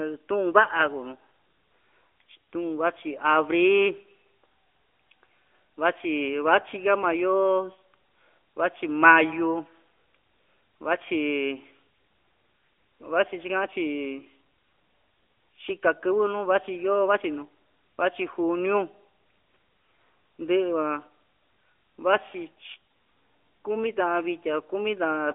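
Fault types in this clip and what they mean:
AMR narrowband mobile codec, throughout: the speech is squeezed into a telephone band of about 300 Hz to 3.4 kHz with nothing above 3.5 kHz, and a frame-by-frame vocal-tract model rebuilds it with plainly audible coding damage, consistent with roughly 10.2 kbps.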